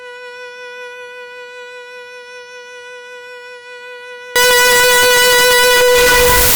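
A music clip whose sound turns into loud, harsh distortion at 4.36 s and stays that way to the end. Quiet moments are as loud as everything else. This is likely signed and unsigned mixed up, with 16-bit samples misread so every zero crossing jumps across the full range.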